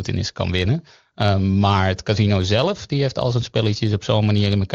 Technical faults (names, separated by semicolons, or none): none